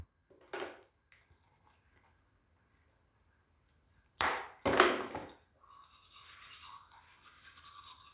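No technical faults can be heard in this recording of sounds; the signal stays intact throughout.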